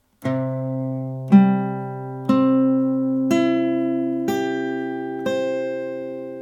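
No dropouts, clicks, distortion or other technical faults can be heard anywhere in the recording.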